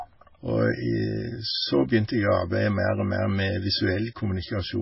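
From start to finish the speech sounds watery and swirly, with metallic chirps on s sounds, smeared onsets and nothing above 5.6 kHz. This heavy damage is likely MP3 compression at a very low bitrate, around 16 kbps, cutting treble and dropping weak frequency lines frame by frame.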